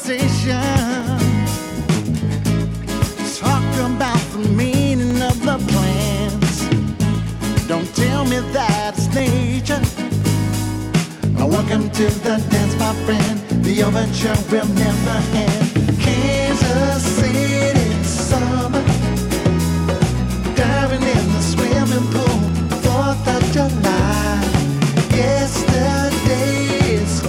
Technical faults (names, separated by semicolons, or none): periodic USB or driver dropouts